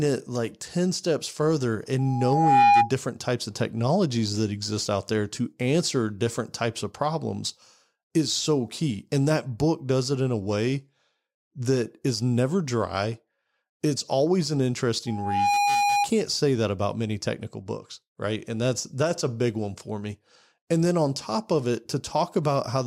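A speech clip with loudspeaker feedback squeal twice, from 1.98 to 2.91 s after "steps further" and from 15.06 to 16.09 s after "always an". A steady 815 Hz tone swells over roughly 0.5 to 0.7 seconds to about 5–10 dB above the speech. The microphone is re-amplifying its own loudspeaker.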